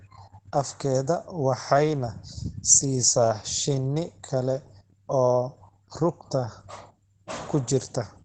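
From start to finish the speech carries Opus voice compression damage, and it is plainly audible. The sound is muffled, slightly hoarse and faintly robotic because the encoder models the voice with linear prediction and codes its excitation coarsely, which fits the SILK mode at roughly 12 kbps. A spectrogram shows a hard ceiling with nothing above 9.2 kHz, and the harmonic detail below it looks smeared and blocky. That pattern points to wideband coding in 20 ms frames.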